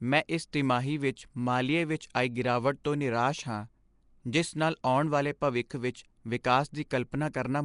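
From start to finish the speech carries a rough, hissy halo and a smeared, underwater quality, with nothing at all above about 10.6 kHz. That's most likely Nellymoser compression, the old Flash microphone codec, and its damage is plainly audible. It codes short blocks at a fixed low number of bits per sample and fills weak bands with noise instead of real content, hence the fizz. The overall rate fits something around 44 kbps.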